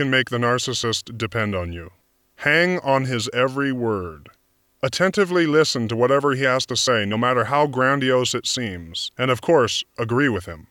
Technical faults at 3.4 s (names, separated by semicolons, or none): none